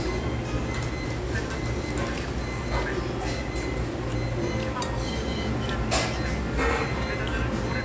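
No faults can be heard anywhere in this recording of sounds.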